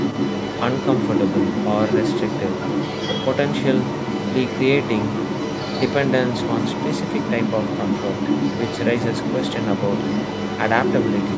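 The echo canceller on the talker's end is likely failing to remove the loudspeaker signal, so in this speech recording the other side's voice leaks through for the whole clip, 0.0 to 11.37 s, at roughly the same level as the main talker, within the call's band-limited audio that stops at 8 kHz.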